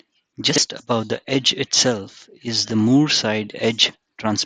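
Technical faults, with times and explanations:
0.50 to 0.58 s, chunks out of order: just before "above the edge itself", the speech briefly jumbles over an 80 ms span. The pattern is consistent with one 20 ms chunk being delivered three chunks late and played after the material that should follow it. No audio is missing, but the sequence is scrambled, and this creates three abrupt joins around the garbled moment.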